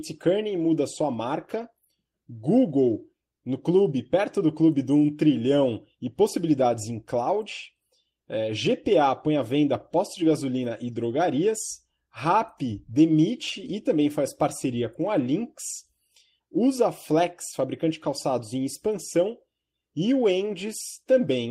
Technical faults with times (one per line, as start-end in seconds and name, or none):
none